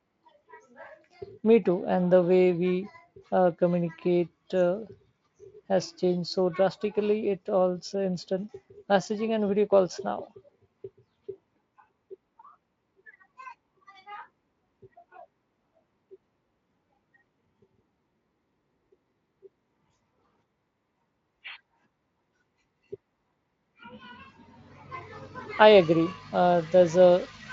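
There are no technical faults to describe at any point in this speech recording.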